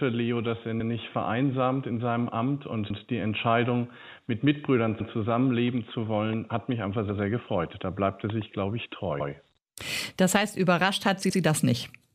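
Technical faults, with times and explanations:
2.90–3.00 s and 9.20–9.30 s: overlapping chunks. At each of these joins the next chunk begins about 100 ms before the previous one ends, so that stretch of sound plays twice. This is heard as a brief stutter, which fits processing in 2 s chunks.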